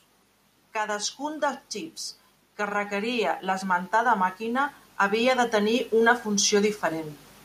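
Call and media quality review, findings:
Voice and background noise floor swelling together, 2.56 s to 7.17 s, rising by about 9 dB across roughly 4.6 s. Automatic gain rising: AGC stage in capture chain judged input too quiet and ramped gain slowly, lifting speech and ambient noise alike rather than speech alone.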